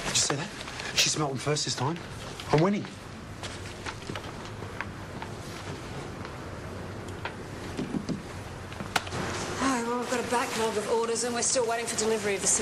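From about 10.02 s to the end at 12.61 s the audio turns thin, bright and hissy-sibilant: pre-emphasis left on. The treble boost was never undone by its matching de-emphasis, leaving 10 kHz up about 8 dB relative to 1 kHz, which fits the CD 50/15 µs curve.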